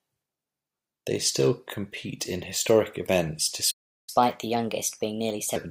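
At 3.71 s the speech just drops out and the line goes dead for about 0.37 s, until 4.09 s. That's a playback stall, most likely the player running dry on data or its thread getting blocked, so nothing reached the output until it recovered.

Right after, from 4.09 s to 5.56 s, you get catch-up at higher speed. The player chews through its backlog at 1.25 times normal rate by resampling, so the speech sounds rushed and shifted up roughly four semitones before settling back.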